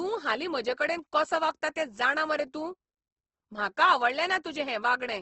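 Throughout the speech, Opus compression is plainly audible: the upper range stops dead at 8.2 kHz, and the rest turns grainy and rough, likely from low-rate CELT coding around 16 kbps. On a spectrogram, a flat ceiling sits at 8.2 kHz, with speckled, noise-filled bands beneath.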